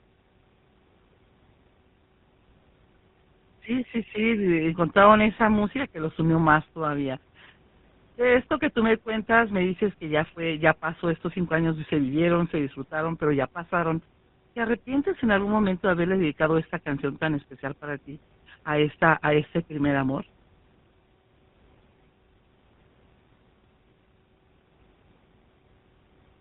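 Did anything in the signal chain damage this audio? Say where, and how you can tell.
Yes, the damage happens at the codec stage and runs through the whole recording: this is tandem speech coding. The speech sounds rough, muffled and warbly in a way one low-rate coder would not produce, which fits two passes through GSM full rate with a G.711 link between them. Each pass re-codes the previous pass's errors, so they compound. On a spectrogram there is nothing above 3.8 kHz, and the harmonics look smeared and blotchy instead of crisp.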